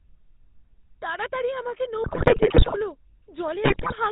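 From the start, the speech carries GSM full-rate codec damage. The vocal tract is modelled and driven by sparse pulses, and nothing above 4 kHz survives. The result is a buzzy, gravelly roughness throughout, consistent with a 13 kbps stream.

From 2.04 to 2.78 s, GSM bit errors break through. Corrupted filter, pitch and gain values reach the decoder. The spectrum bends and the level jumps frame by frame. The voice squawks, pops and gargles. A shorter burst follows from 3.64 to 3.94 s.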